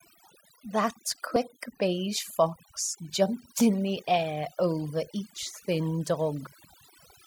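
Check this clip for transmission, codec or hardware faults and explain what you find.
The fault is overdone noise removal, audible for the whole of this speech clip. The noise reduction was set too aggressively, so frequency bands close to its noise estimate were pushed right down, taking the quieter parts of the voice with them. Background gaps fall to near silence scattered with twinkling specks. On a spectrogram, the pauses appear as mostly empty regions with isolated flickering dots, and the harmonics look ragged and patchy.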